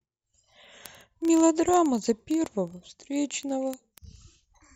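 Word clock ticks run from 0.1 to 4.74 s. An unlocked receiving clock, roughly 700 ppm off, drops or repeats a sample about every 30 ms, giving a steady train of ticks.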